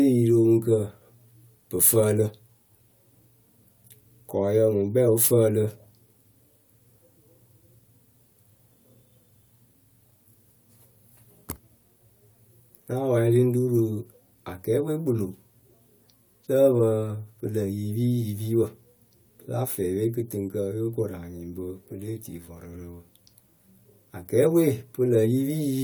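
Nothing technically wrong turns up anywhere in this recording of speech, so there's nothing here to point to by time or cause.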